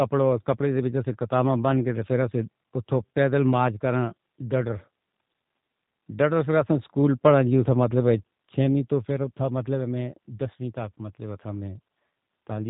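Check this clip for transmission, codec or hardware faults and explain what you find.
The speech has passed through the G.729 codec, a low-rate VoIP coder whose damage is plainly audible throughout the clip. Instead of sending the waveform, it sends a vocal tract filter, a pitch predictor and a sparse set of pulses for each short frame, a rebuild that fits an 8 kbit/s stream. Everything above about 3.8 kHz is gone, so the speech sounds narrow and dull, and the sparse excitation gives it a rough, slightly synthetic buzz.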